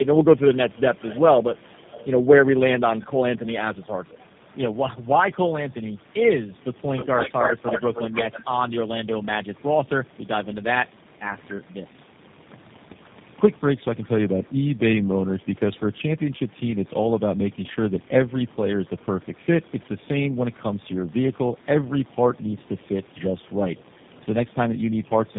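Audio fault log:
throughout, tandem speech coding: the speech sounds rough, muffled and warbly, with nothing above 3.7 kHz. This is what happens when a call is decoded and re-encoded at each network border. Here the sound points to three low-rate speech codecs in a row, such as AMR-NB, GSM full rate and G.729A. Each coder reshapes the previous one's artefacts instead of the original speech, so the smearing and loss of detail compound beyond what any one link would cause.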